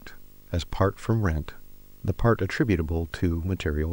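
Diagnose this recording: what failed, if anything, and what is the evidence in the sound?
Video or display buzz runs throughout the speech, a failure in the analogue wiring. A 50 Hz buzz with hash above it sits roughly 30 dB under the voice, plus a thin 15.6 kHz whine: a screen or video cable is coupling its field-rate and line-rate energy into the audio path.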